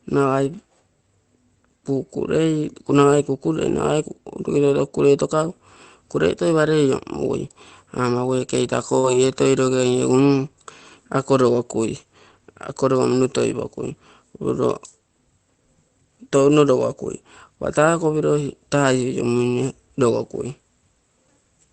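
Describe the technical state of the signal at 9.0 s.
At 8.99 to 9.05 s there is a short concealed packet loss. About 40 ms of speech never arrived. The receiver extended the preceding sound to cover the gap, heard as a brief smear.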